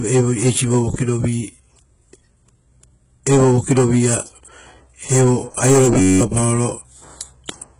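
Speech with heavy codec damage throughout: gritty, metallic treble with nothing above 15.2 kHz, likely from HE-AAC compression at a low bitrate. From 6.00 to 6.21 s a system hang loop repeats one 10.67 ms slice, which fits a 512-sample buffer, about 20 times, giving a 93.8 Hz buzz that replaces about a fifth of a second of audio.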